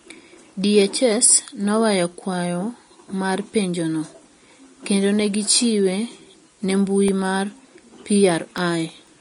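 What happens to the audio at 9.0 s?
Around 9.0 s the speech is interrupted by a small, sharp tick, the last in a regular series heard every 0.5 s from 7.08 s to 9.07 s, about five in all. These are periodic USB or driver dropouts. A background task stalls the audio path at a fixed interval, and each time roughly a millisecond of signal is lost and replaced with silence. The abrupt gap in the waveform produces the click, which is audible only because speech is present.

The same moment also carries the grainy, hissy texture heard across the whole clip, and nothing remains above 10.6 kHz. This is likely Vorbis compression at a low bitrate, which the sound suggests is somewhere near 33 kbps. At that rate the encoder cuts the top of the spectrum and quantises the upper residue so coarsely that fine detail turns into noise of similar energy, which also softens the edges of consonants.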